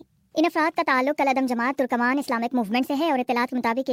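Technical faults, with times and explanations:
Throughout: wrong sample rate. The audio runs 1.38 times too fast and sits about 5.55 semitones high, with speed and pitch shifted together. That ratio fits material recorded at 32 kHz and played back at 44.1 kHz without any rate conversion.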